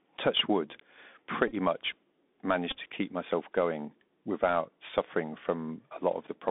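The whole clip runs through the Bluetooth CVSD headset codec. That one-bit up/down coder, which fits a 64 kbps link, keeps only about 200 Hz to 3.6 kHz, so it sounds boxed in. Sibilants come out scratchy, loud bright moments distort, and a grainy hiss sits underneath.

There's a Bluetooth headset packet repeat from 1.48 to 1.54 s and again from 2.70 to 2.78 s, just before "to keep myself going". Lost packets got replaced by replaying the previous one, in short runs, giving brief buzzy, stuttery patches.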